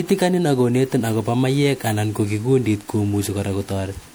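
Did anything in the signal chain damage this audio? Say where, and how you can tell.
Yes, at the codec stage, for the full length of the speech. The sound is swirly and hollow, with smeared consonant attacks and a watery texture beyond what a single moderate-bitrate pass would give. That points to generation loss, likely from repeated MP3 re-encoding at around 96 kbit/s, perhaps half a dozen or more passes. Each pass requantises on a shifted frame grid, so the noise and spectral holes compound instead of cancelling.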